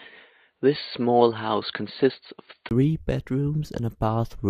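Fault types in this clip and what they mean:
Input switched to a poorer device: for the first 2.71 s the speech sounds dull and boxy, with nothing above 4.5 kHz, then a 20 ms gap gives way to fuller, brighter sound. The likely cause is recording starting on a narrower-band microphone or headset profile before the input changed. A spectrogram shows an empty upper band until 2.71 s, then filling in. The waveform shows a brief flat gap there, no level jump, and a faint noise floor early on.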